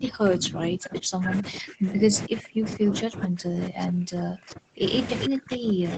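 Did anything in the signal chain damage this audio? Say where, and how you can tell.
Yes. Speech suppressed in double talk at the call-processing stage: from 0 to 4.84 s and 5.28 s onward, level ducks up to about 40 dB. The ducking tracks overlapping talk, not packet-loss gaps, which likely points to an overwhelmed echo canceller.

Echo leak from loudspeaker pickup: brief delayed copies at 3.81–3.85 s, 4.50–4.54 s (about 25 dB down) and 5.21–5.26 s (about 10 dB down), each 401 ms late. A fixed discrete delay, unlike diffuse reverb, likely means leftover echo.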